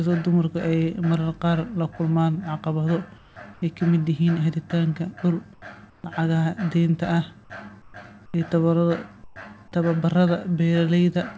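At 3.18–3.36 s, 3.54–3.62 s (before "ay ka"), 5.54–5.62 s (before "lacagaha deynta"), 5.90–6.04 s, 7.82–7.94 s, 8.26–8.34 s and 9.24–9.36 s, comfort noise replaces the background in the pauses. It is likely from discontinuous transmission on the G.722 call path. The background turns into a flat, featureless hiss, about 4 to 13 dB quieter. Unlike a noise gate, the pauses never fall to silence.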